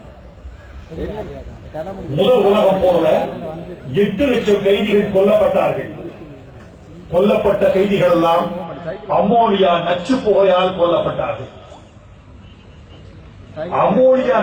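From the start to 8.64 s there is sample clock jitter: the converter's timing wanders by a few microseconds, so fast-changing, loud passages pick up a hiss-like roughness some 35 dB down. On a spectrogram, broadband noise tracks loud, bright moments and disappears in quiet gaps.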